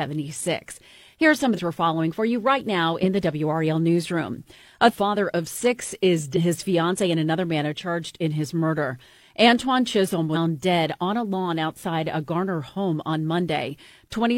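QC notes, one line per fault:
1.54–1.60 s, 4.88–4.94 s, 6.32–6.38 s, 10.31–10.36 s: compressed frames skipped. The speech jumps ahead by about 0.4 s, 1 s, 0.4 s and 0.2 s, consistent with whole frames of around 46 ms being dropped.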